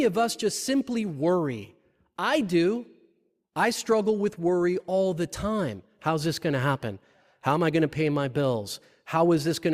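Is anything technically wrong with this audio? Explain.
No, nothing technically wrong can be heard here.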